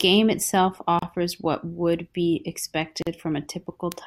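At 0.99 to 1.02 s, just before "what would be", the speech drops into a silence of about 32 ms, and at 3.02 to 3.07 s a second one lasts about 43 ms. Both are gaps at a join of encoded pieces. The gaps fall 2.0 s apart, where separately encoded segments were butted together with their start-up delay and end padding left in. Unlike a dropout, nothing is lost: the edges are smeared, and the speech resumes exactly where it stopped.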